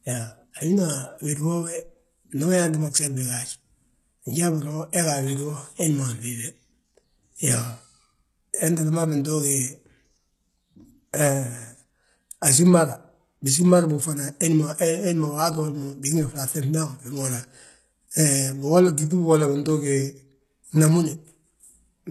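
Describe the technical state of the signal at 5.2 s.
At 5.2 s the speech carries plainly audible HE-AAC compression, present across the whole clip. Nothing sounds above 12.3 kHz. The treble is rebuilt and gritty, with lispy s sounds. This likely comes from band replication copying lower bands upward, fitting roughly 16 kbps.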